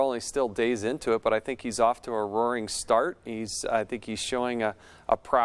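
No technical faults can be heard anywhere in the clip. Nothing in the audio points to a dropout, a distortion or a timing problem at any point.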